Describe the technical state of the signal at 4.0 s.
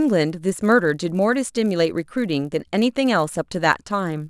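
A steady buzz rides on the speech at 4.0 s, a rapid train of ticks at 100 Hz that follows the signal and drops away when the sound stops. It runs through the whole clip, not just this moment. The cause is a resampler restarted on every block. The 48 kHz to 24 kHz conversion was run on each 10 ms block separately, so each block edge carries a small error, and one edge every 10 ms produces the 100 Hz buzz.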